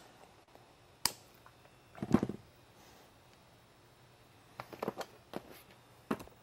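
At 0.43 to 0.48 s there's a short concealed packet loss: about 40 ms never arrived, so the decoder extended the preceding sound, leaving a brief smear.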